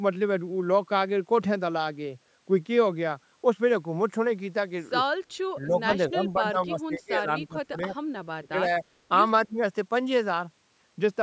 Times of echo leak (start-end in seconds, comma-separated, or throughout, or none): 5.89-5.93